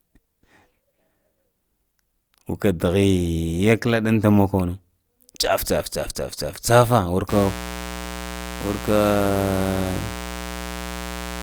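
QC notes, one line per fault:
7.29–11.42 s, mains buzz: sharp 60 Hz switching spikes leak into the signal path, adding a steady raspy buzz rich in harmonics, roughly 10 dB below the speech, running to the end.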